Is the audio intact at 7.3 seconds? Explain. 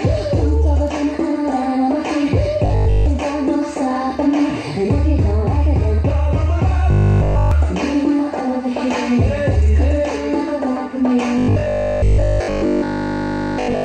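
No. From 6.91 to 7.51 s there is robotic sound from repeated short buffers. Audio was likely arriving too late, so playback looped the last 20 ms instead of the real material, imposing a rigid, metallic 50 Hz buzz on the sound.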